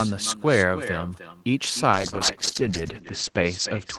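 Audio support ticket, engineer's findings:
Echo with no canceller: far end's loudspeaker feeding its mic, nothing removing it. Speech shadowed throughout by a thinner copy about a third of a second late, about 12 dB below the direct signal.

Call bitrate drop from 1.94 s to the end: encoder starved after the bandwidth estimate fell, which fits a drop from 32 to 9 kbps. Top end cut to 8 kHz, speech turning rough and muffled, worst for about 1.04 s.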